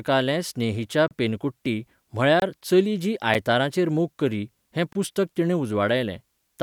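At 1.08 to 1.11 s the speech drops into a 30 ms hole, a gap at a join of encoded pieces. Separately encoded segments were butted together with their encoder delay and end padding left in. The edges are smeared, and the speech resumes exactly where it stopped.

At 2.40 to 2.42 s a 23 ms gap between chunks appears, where silence was left between 2.5 s blocks on playback or storage. Nothing is lost, but the sound is interrupted at the join.

At 3.34 s a second, much shorter gap at a join of encoded pieces, only about 8 ms, briefly interrupts the speech.

At 4.93 to 4.95 s the same 23 ms chunk gap recurs, 2.5 s after the first, confirming the regular block spacing.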